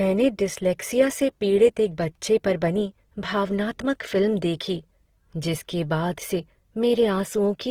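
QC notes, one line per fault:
Throughout: Opus compression. The speech comes across grainy and rough, with tonal parts turning noisy rather than swirly, while the top end still reaches about 20.2 kHz, so nothing sounds muffled. That's the likely cause: Opus in its music mode at a low rate, which fits around 16 kbps, holding each band's energy but filling starved bands with noise or folded copies of lower ones instead of leaving gaps.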